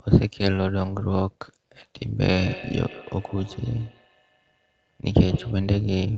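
Speech runs through the whole clip with an overlap-add ripple. The level swings by about 6 dB at a rate of around 200 Hz, which gives every syllable a metallic buzz with extra tones around each note. That points to frames being windowed and rejoined with an overlap whose gains don't sum evenly, so the level dips once per frame. Unlike a slow tremolo or packet dropouts, the modulation is fast, steady and never breaks the sound. From 2.19 to 5.69 s a feedback echo between two devices comes in. Each phrase returns roughly every 150 ms, peaking at about 16 dB below the direct speech, and each pass sounds thinner and more ringing than the last. A second device in the room is likely replaying the far end into a microphone whose echo canceller can't remove sound it didn't play itself. Room reverberation is a smooth wash, and a single slapback echo comes back only once. This echo instead repeats at a fixed spacing and fades in steps. 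The top of the spectrum stops near 8 kHz, consistent with the Opus call path.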